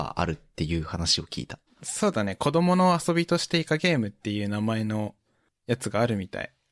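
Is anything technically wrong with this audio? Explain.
No, the speech signal shows no audible technical faults.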